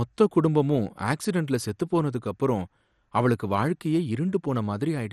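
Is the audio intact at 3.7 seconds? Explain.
No. Throughout the speech, including 3.7 s, the sound is dull and gurgling with nothing above 14.2 kHz, likely MP2 compression starving the upper sub-bands of bits.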